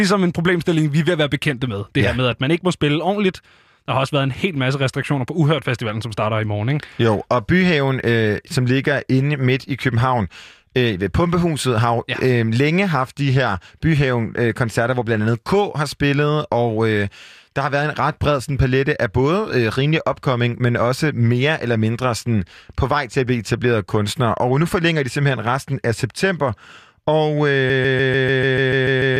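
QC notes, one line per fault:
27.70–29.20 s, broken-record loop. A fragment of about 147 ms repeats exactly, back to back, ten times. It does not stop until the clip ends. The sound stutters in a fixed, mechanical rhythm with no variation between repeats. The likely cause is a stalled player, encoder or stream that kept resending the last fragment it held. Whatever audio belonged in that final stretch is gone and cannot be heard.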